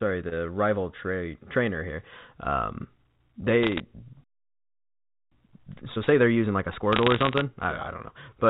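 From 3.63 to 3.8 s, bit errors on a digital phone line cause a brief burst of crackle. On this G.711 A-law line, flipped bits corrupt single samples. Hits on the sign or high bits become sharp ticks over the speech. The error rate sounds like roughly half a percent.

At 4.24 s the sound cuts out mid-flow. This playback stall lasts about 1.08 s, until 5.32 s. The player likely ran out of data or was blocked, so the output stayed silent until it recovered.

From 5.32 to 8.32 s, time-compressed catch-up follows. The player trims its backlog by removing short pieces and cross-fading the joins. The speech runs 1.25 times faster at normal pitch. Between 6.92 and 7.41 s, a second, longer patch of bit-error crackle overlaps this hurried stretch.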